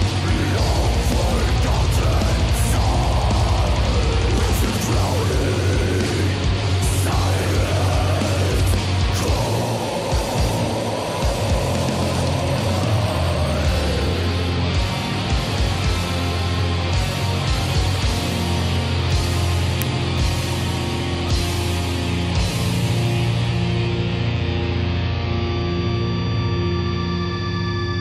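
An uninitialised buffer fault occurs at 19.82 s: a block of about 0.67 ms was sent to the output before any audio had been written into it, so stale memory contents played as samples. It is heard as a brief, loud crack, which fits a 32-sample block.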